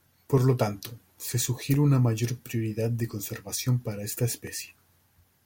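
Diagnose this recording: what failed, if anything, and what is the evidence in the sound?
A regular click recurs through the speech about every 1.37 s, from 0.38 s to 4.47 s, about four times. This points to the driver or buffer stage, most likely clock drift buffer slips. Two devices running on their own clocks, off by something like 700 ppm, let the buffer creep until a block of samples is dropped or repeated. The spacing fits a slip of roughly 50 samples each time. On a spectrogram, each slip shows as a thin vertical broadband line at evenly spaced times. On the waveform, it appears as a sudden step or discontinuity.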